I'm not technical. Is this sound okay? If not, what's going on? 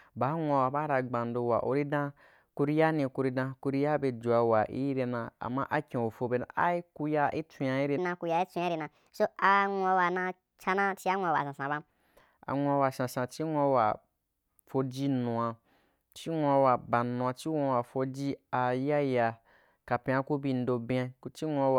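No. Part of this speech recording was most likely played back against the wrong clock, giving a section at the wrong speed. From 7.98 to 11.90 seconds, right after "a ire", the audio runs about 1.36 times too fast, so the voice sounds hurried and lifts by roughly five semitones, a higher tone. At "anwuawa sansan chi nwu" the normal speed and pitch return.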